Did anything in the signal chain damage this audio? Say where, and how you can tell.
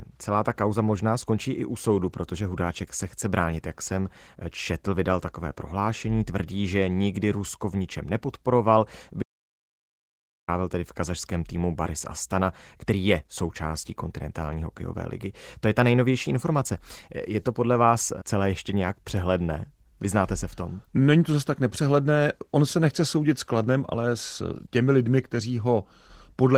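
Yes. Opus voice compression at the codec stage, throughout: the speech is muffled, hoarse and slightly robotic, which fits low-bitrate hybrid coding around 16 kbps.

Audio dropout to silence at the input stage, 9.23 to 10.48 s, between "v ničem nepodporoval" and "tedy v kazašském týmu". The gap is silent with no room tone, likely from a lost input link.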